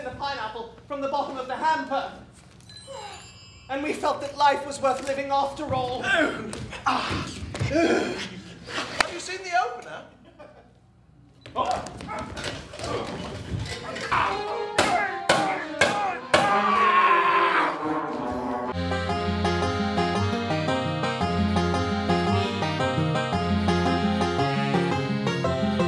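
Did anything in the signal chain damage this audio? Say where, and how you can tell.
No, nothing in the chain has left an audible fault on this recording, at any stage from capture through to playback.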